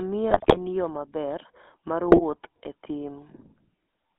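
A short speech recording carried over a GSM full-rate codec for its whole length. The band is confined to roughly 250 Hz to 3.5 kHz, and the voice has the buzzy, gravelly texture of a coder that models the vocal tract and excites it with a sparse, regular pulse train. That coarse excitation is what makes the damage plainly audible, and the character points to the 13 kbps full-rate scheme. On top of this, GSM bit errors break the sound up twice, from 0.30 to 0.59 s and again from 2.08 to 2.22 s. Corrupted filter, pitch and gain parameters reach the decoder, so individual frames come out with a warped spectrum or a sudden jump in level. The result is squawks, pops and a gargling quality across each span. The first burst is longer and carries a heavier error rate, which fits a weaker stretch of the link.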